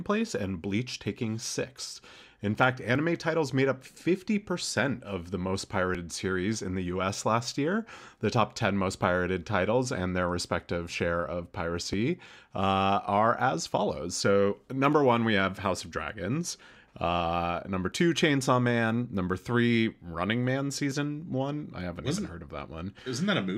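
Short skips of audio missing between chunks are heard at 2.95 s, just before "titles made up", then at 5.95, 11.93 (right after "their respective share of"), 14.93, 17.92 and 20.91 s, just before "one I haven't not". Each is a tiny jump in the speech, a few milliseconds long, with the two sides butted together. The spacing fits a recorder working in 3-second blocks. It likely drops a sliver while closing one block and opening the next.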